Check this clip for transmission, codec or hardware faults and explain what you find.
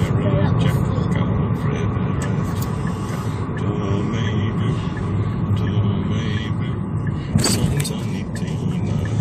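Two brief faults are present, both damaged data in a compressed stream. They occur at 2.40 s and 7.84 s. Corrupted bytes there make the decoder misread frames, lose sync and hunt for the next valid header. Each event is a short chirp, squawk, click or hole cutting across the sound.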